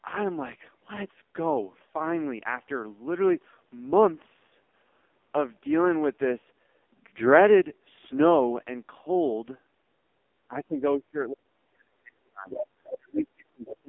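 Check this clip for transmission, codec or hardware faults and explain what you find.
Three faults are present: heavy narrowband codec damage throughout, and, near the end, the talker's speech being pushed down while scraps of a second voice leak in.

AMR narrowband mobile codec: throughout, the speech is squeezed into roughly 250 Hz to 3.5 kHz, with nothing above 3.6 kHz. The heavy buzzy, synthetic texture points to a low AMR-NB mode, around 5.15 kbit/s. Its few pulses per subframe cannot rebuild natural voicing, which sets it apart from a simple band-limited line.

Speech suppressed in double talk: from 10.48 to 12.61 s, and from 12.82 s to the end, the talker's speech dips and breaks up for about 1.5 s and 1 s in total, with drops of around 35 dB. The likely cause is an echo canceller turning everything down while both sides talked.

Other side's voice leaking through: brief fragments of a second voice appear at 12.5 to 12.67 s, 12.86 to 12.94 s and 13.66 to 13.77 s, roughly 10 to 15 dB below the talker. 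The cause is likely loudspeaker echo left in the microphone signal. It clusters inside the suppression episodes.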